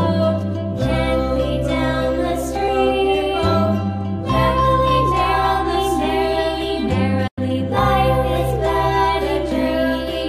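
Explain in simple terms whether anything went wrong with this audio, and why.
Two things go wrong in this audio.

At 2.68 s there is a block of digital silence. For less than a millisecond, the sound is swapped for silence. The program most likely failed to fill its output buffer in time. The cut is sudden, with no fade in or out. Because it is so short, you hear a small tick rather than a gap. Its length points to a tiny block of a few dozen samples.

From 7.27 s to 7.38 s there is a digital broadcast dropout. The receiver lost good data for a moment and muted itself until clean data came back. The sound fades out very quickly, in about 8 ms, and stays silent for about 96 ms. That length suggests a few broadcast frames were lost. Whatever was sent during that hole is gone for good.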